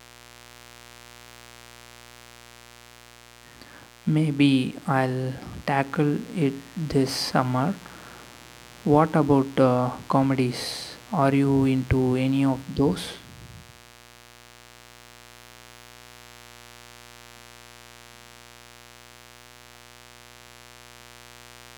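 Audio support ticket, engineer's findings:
Steady, raspy buzz under the speech for the whole clip, well below the talker but never letting up. Mains buzz, 60 Hz. Probable source: dimmer, rectifier or unshielded cable letting sharp switching spikes in twice per mains cycle. The spikes carry 60 Hz harmonics up into the kilohertz range, so the interference reads as rasp rather than a smooth hum.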